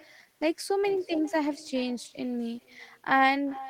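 Echo with no canceller runs throughout: the far end's loudspeaker feeds its microphone, returning the speech roughly 0.4 s later as a thin copy about 21 dB down.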